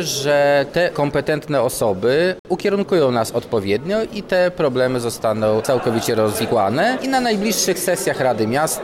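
At 2.39 s the sound stops dead and returns at 2.45 s. This is a gap between stream segments. The timestamps of two consecutive pieces of the stream do not meet, so the player fills the space with silence. The hole lasts about 56 ms and has hard edges on both sides. Nothing is missing from the material. The silence is inserted, pushing everything after it slightly later.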